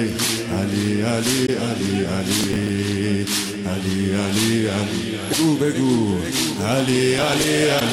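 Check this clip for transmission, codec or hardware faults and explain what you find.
Two kinds of fault are audible: damaged data in a compressed stream, three times, and processor overload crackle, twice.

Damaged data in a compressed stream shows up at 1.46 to 1.49 s, 5.29 to 5.35 s and 7.77 to 7.82 s. Bytes in the stream are wrong at these points. The decoder misreads those frames and hunts for the next valid header. Each one is a brief chirp or blip.

Processor overload crackle runs from 2.39 to 2.69 s and from 7.18 to 7.44 s. The processor falls behind and misses deadlines for small buffers of around 5 ms, roughly ten of them. Each missed buffer is skipped, leaving a hard-edged gap. Together the gaps make a gritty crackle over the sound.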